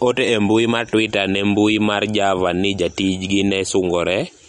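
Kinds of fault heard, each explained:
MP3 compression: The speech sounds dull and plainly processed throughout, with nothing above about 10.7 kHz and a watery, swirling texture where faint detail flickers in and out. This is likely lossy MP3 coding at a low bitrate, around 48 kbps. The encoder cannot afford the top of the spectrum, so it cuts everything above a fixed frequency. It also drops quieter frequency components whenever bits run short, so those components switch on and off from frame to frame.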